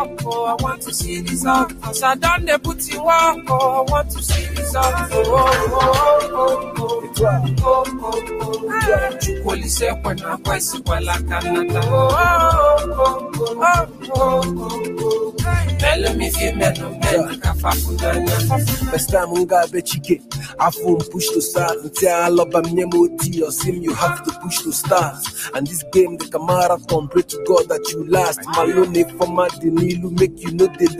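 A noise suppressor applied to music or sounds runs through the whole clip. It was built for speech. Here it treats steady tones, ambience and reverb as noise. Its gain keeps moving, with level swings of roughly 10 dB. Sharp onsets pass through. Held sound and decaying tails are pulled down. The result pumps and flutters, and the body of the sound thins out.

Sound is cut by the noise suppressor in seven stretches: 0.05 to 3.5 s, 6.62 to 10.88 s, 13.2 to 15.4 s, 16.73 to 17.45 s, 19.67 to 21.93 s, 24.25 to 26.9 s, and 28.38 s to the end. In each one the suppressor mistakes part of the sound for noise. It drops that part by about 10 to 13 dB at the deepest. The dips total around half a second to one and a half seconds in each of the first six stretches. Sustained parts sink, and tails stop early.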